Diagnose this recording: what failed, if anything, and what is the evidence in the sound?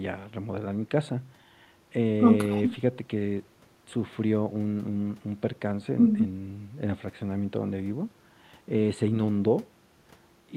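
Nothing failed in this recording, and the sound carries no evidence of a fault at any stage.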